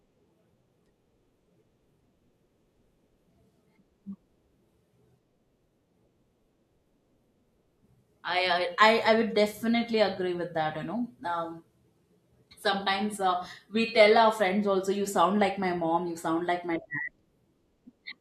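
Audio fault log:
No fault can be heard anywhere in this speech recording. Nothing in it needs a time or an entry in this log.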